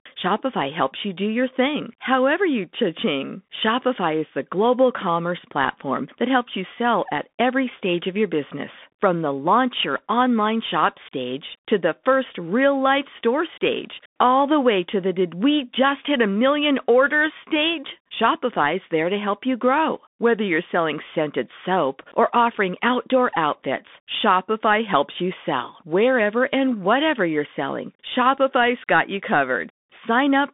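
From start to finish, the speech passes through a Bluetooth CVSD headset codec. The band runs from about 200 Hz to 3.6 kHz, and nothing survives above 3.8 kHz. The codec damage is plainly audible. CVSD sends a single up-or-down bit per sample, which fits a 64 kbps stream, and its adaptive step lags behind fast loud movements. Sibilants come out rough and gritty. A fine, grainy hiss sits beneath the speech.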